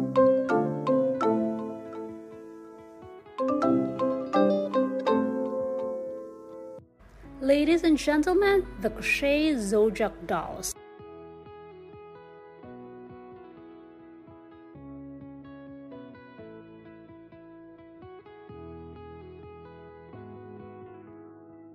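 No technical faults can be heard in this audio, so there are none to describe in time order.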